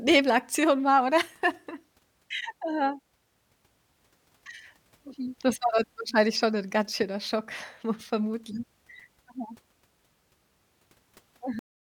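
At 11.59 s the speech ends in a cut-off end: the signal stops partway through a sound rather than trailing off naturally. The final stretch of audio, roughly the last 0.4 s, was never written out or played back, so the waveform jumps straight from active speech to digital silence. There is no decay or room tail, and the sound is simply truncated, an abrupt, unnatural stop where the recording should have continued.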